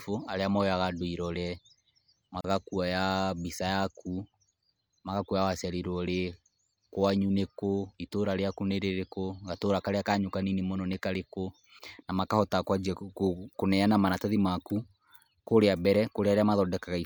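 It's a speech clip with one glitch: a gap at a join of encoded pieces, from about 2.41 s to 2.44 s. The speech just drops out for 35 ms, with edges that the codec has blurred, then picks up exactly where it stopped. That's what you get when two separately encoded chunks are butted together untrimmed, so the encoder's start-up silence and the final frame's padding both stay in.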